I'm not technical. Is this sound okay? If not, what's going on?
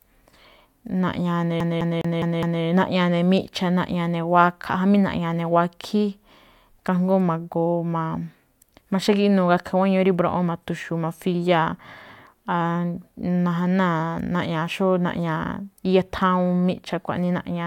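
No. From 1.60 to 2.63 s the speech sticks like a CD stuck on one turn: the same fifth of a second (about 0.21 s) plays five times in a row, each time with a tiny silent gap where it jumps back. It sounds like a skipping disc, not like someone stammering. A person repeating themselves would vary each attempt. Here every repeat is an identical copy at a fast, perfectly even rhythm, and then the speech carries on.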